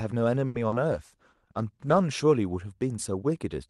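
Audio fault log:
0.47 to 0.56 s, short stall from a late packet: a packet showed up late, the jitter buffer ran dry, and the receiver held the last sound for about 70 ms before carrying on from the same spot. Nothing's lost, but that sound drags a bit too long, with a faint buzzy dip.
0.68 to 0.76 s, short concealed packet loss: about 40 ms of speech never made it to the decoder, so the receiver papered over the gap by extending what came before and then blending back in. You hear a quick smear or wobble there.
0.91 to 2.11 s, call bitrate drop: the bandwidth estimate fell and Opus got squeezed from 48 kbps down to 14 kbps, sitting at the bottom for about 1.1 s. The coarser coding makes the speech rougher and more watery until the rate climbs back up.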